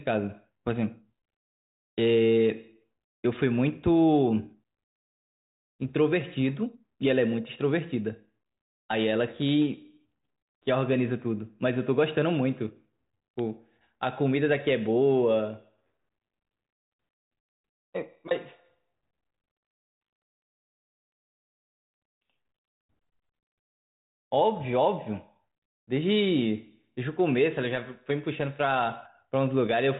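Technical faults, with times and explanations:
No technical faults can be heard in this speech. The G.726 ADPCM path at 40 kbit/s shows only as a telephone-band sound with nothing above about 3.8 kHz, and any coding hiss is at most faint.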